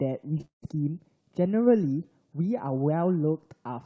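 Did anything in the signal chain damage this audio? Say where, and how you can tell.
Yes, network loss: from 0.38 to 0.67 s the speech goes choppy and robotic, with four holes patched by stretching the last sound, the longest 170 ms.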